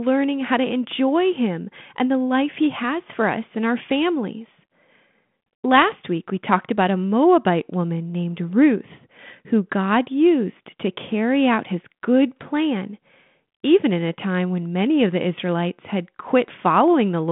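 No technical faults can be heard anywhere in this recording.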